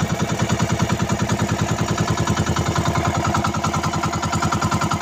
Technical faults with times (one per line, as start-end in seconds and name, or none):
3.69-3.96 processor overload crackle